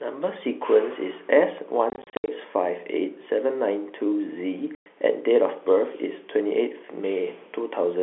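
Speech heard over a G.711 telephone line, confined to roughly 300 Hz to 3.4 kHz, is broken by packet loss filled with silence: 230 ms of holes scattered between 1.9 and 2.28 s (longest 70 ms), then a solid 110 ms gap at 4.75 to 4.86 s. The hole lengths fit 10 ms packets. The waveform drops abruptly to silence at hard edges, and the spectrogram shows blank vertical stripes.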